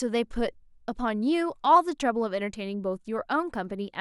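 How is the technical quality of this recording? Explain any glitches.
The speech carries word clock ticks from 0.69 s to 3.55 s. There are about four sharp ticks, roughly one per second. The receiving device runs on its own clock, about 20 ppm off the sender's. Each time the clocks slip, one sample is dropped or repeated.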